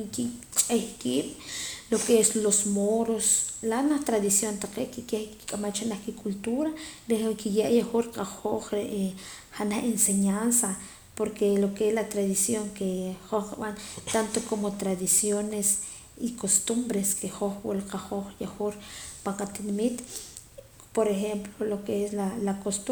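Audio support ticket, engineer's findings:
No faults found on listening.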